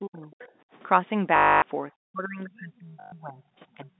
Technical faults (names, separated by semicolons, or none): speech suppressed in double talk; other side's voice leaking through; background gated by the echo canceller; packet loss with last packet repeated